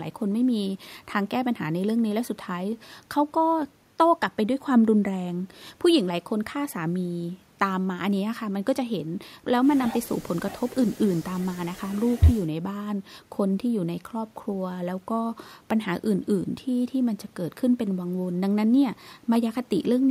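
Speech recording with no audible technical faults.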